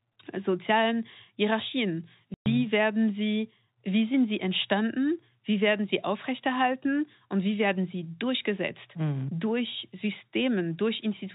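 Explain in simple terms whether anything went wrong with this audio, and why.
Part of the stream never arrived: this is packet loss filled with silence. Between 2.34 and 2.46 s, the receiver was missing 120 ms of speech, which fits six packets of 20 ms each, and played nothing in their place. You hear the speech suddenly cut out for that instant. The narrow, telephone-like tone comes from the phone-line coding it travelled through.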